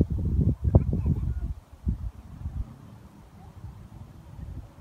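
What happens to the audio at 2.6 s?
Damaged data in the compressed stream from 2.60 to 2.63 s makes the decoder misread frames and lose sync, producing a brief chirp or blip.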